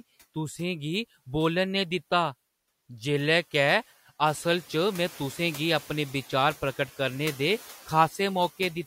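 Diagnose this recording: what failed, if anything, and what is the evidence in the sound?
The trouble is in call processing: noise suppressor artifacts run through the whole speech clip. The background drops by about 11 dB in the gaps and swells back under speech, leaving a residue from gain being cut band by band, frame by frame.

The same stage also shows the noise suppressor catching up. The room noise genuinely steps up by about 12 dB, and from 4.26 to 4.49 s it leaks through with only about 5 dB of cut before sinking, since the noise estimate takes 230 ms to adapt.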